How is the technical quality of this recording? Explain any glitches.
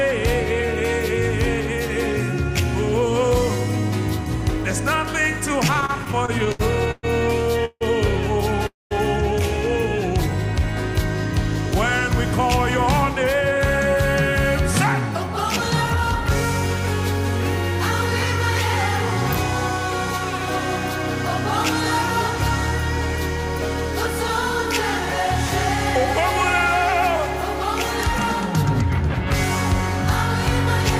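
The recording has four kinds of network and interference fault: three clustered between 5.7 and 14 s, plus one isolated event near the end.

From 5.67 to 7.05 s there are repeated stalls (stutter). The audio catches twelve times in quick succession, with each gap filled by a stretched continuation of the preceding sound. The longest single hold lasts 119 ms, and the fills total 316 ms, about a quarter of that stretch. Packets were arriving more slowly than playback consumed them, so the jitter buffer kept running dry and refilling. Nothing is lost, but the passage drags in a halting rhythm. What separates this from a freeze is the rapid train of short holds rather than one long stop.

Two call audio freezes follow, at 7.65 to 7.83 s and 8.67 to 8.93 s. Each is a single hold where the last sound continues as a fading buzz and then goes quiet: 156 ms of fill with 40 ms of silence in the first, and 240 ms with 190 ms of silence in the second. 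The likely cause is packets delayed in transit, emptying the buffer until they arrived. The audio then resumes exactly where it stopped, so a gap is inserted and nothing is missing.

From 13.34 to 13.96 s a jitter buffer speed-up makes the audio run about 8% fast at unchanged pitch. The buffer held surplus audio, and the receiver trimmed it by cutting out tiny pitch-period slices many times in a row, removing roughly 50 ms in all. The result sounds briefly hurried. This is the opposite of the stalls, since time is taken out rather than added.

At 28.03 s an electrical switching spike appears as a sharp snap sitting on top of the sound, lasting only a couple of milliseconds. A nearby switch or discharge arcing into the audio line is the probable source. It differs from the packet faults because it adds a click without interrupting or retiming the audio.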